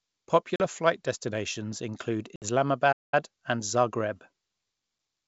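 At 0.56 to 0.67 s and again at 2.36 to 2.45 s there is packet loss on an ADPCM call: about 40 ms and then 60 ms of speech, about two and then three packets, drop to hard-edged silence. The decoder's adaptive predictor and step size lose track of the sender, so the speech re-enters slightly distorted before settling. From 2.92 to 3.14 s the audio stops dead for about 200 ms and then continues, most likely a playback stall in which the player ran short of data. The G.722 wideband coding underneath is at 64 kbit/s.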